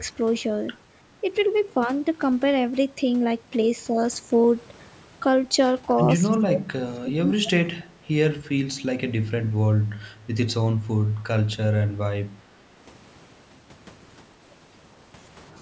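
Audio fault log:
6.39–7.76 s, speech suppressed in double talk: the speech dips hard, roughly 30 dB at worst, and is turned down for about a second in total. Likely the echo canceller couldn't tell this talker from far-end echo during crosstalk, so it turned both down.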